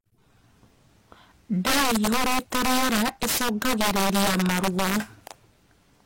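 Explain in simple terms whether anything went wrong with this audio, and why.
Sharp, violent cracks burst out on the loudest parts of the speech throughout. This is integer overflow: peaks grew too big for the numbers and wrapped around instead of being limited.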